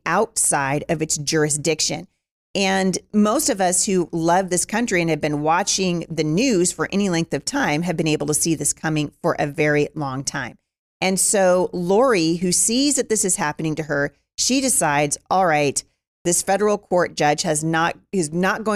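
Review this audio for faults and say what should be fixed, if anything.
Nothing stood out on listening to this speech recording, so there is nothing here that calls for fixing.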